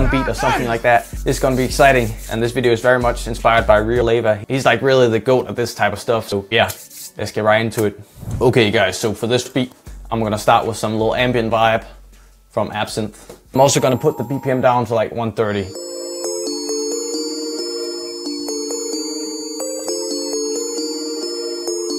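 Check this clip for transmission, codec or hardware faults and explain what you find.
Five brief codec glitches from damaged data in a compressed stream occur at 4.02, 6.32, 9.46, 13.55 and 19.79 s. Corrupted bytes make the decoder misread frames and lose sync until the next frame header. Each sounds like a tiny chirp or blip, showing as a thin vertical broadband stripe on a spectrogram and a sharp discontinuity in the waveform.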